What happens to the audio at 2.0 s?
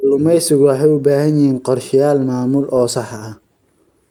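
Nothing goes wrong at 2.0 s; the speech runs on intact through that moment, with no audible fault.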